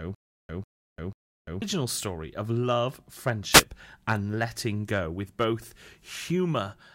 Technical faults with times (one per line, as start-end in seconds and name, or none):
0.00-1.62 stutter with silent gaps
3.50-3.64 wireless microphone noise hit